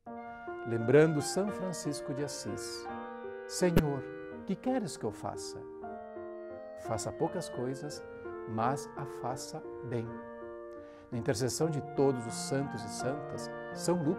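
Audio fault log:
3.77–3.80 s, corrupt frame decoded: a short, loud blip peaking at about -10 dBFS over roughly two compressed frames. Flipped bits left gains and codes misread, yet the decoder played those frames anyway, scattering energy into wrong frequencies for their brief duration.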